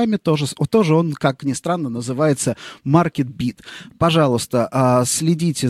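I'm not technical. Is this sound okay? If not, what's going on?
Yes, this one's fine: nothing in it is broken or glitching, so there's nothing you need to worry about.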